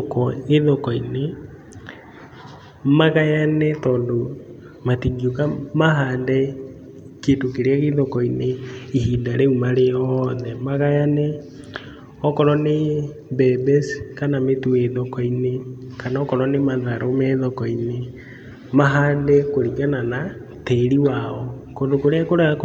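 No technical faults are audible anywhere in the recording.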